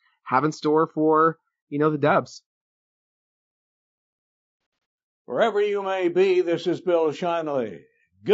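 Throughout the speech there is a rough, grainy texture, with noise filling the gaps between harmonics and a thin, synthetic top end. This is likely low-delay AAC compression (AAC-ELD), whose short frames resolve pitch poorly and point to a bitrate of around 32 kbps.

From 4.61 to 4.85 s the sound turns briefly smeared and phasey in a few short patches. This is AAC frame loss with concealment. About 90 ms of audio, in runs no longer than a few tens of milliseconds, went missing, which fits three lost frames. The decoder then patched each gap from the previous spectrum.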